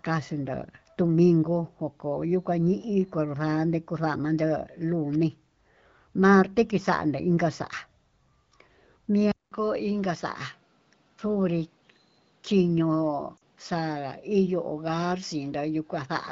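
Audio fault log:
9.32 s to end: likely input switched to a poorer device. After a 200 ms silence, the band stops at 6.2 kHz, level drops about 5 dB, and new background noise sits roughly 40 dB down.
13.37 to 13.39 s: lost AMR speech frames. The decoder repeats the last good speech parameters with falling gain, so the voice drops to near silence across the two lost frames and comes back weak or rough for a moment.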